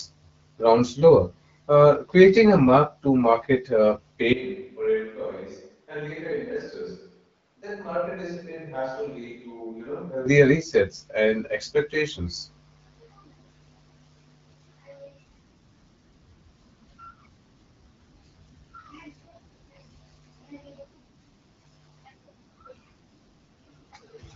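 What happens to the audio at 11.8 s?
Nothing goes wrong at 11.8 s: the speech carries on intact, with only the light, band-limited character of AMR wideband (HD Voice) coding at 12.65 kbit/s, which leaves nothing above about 7.5 kHz.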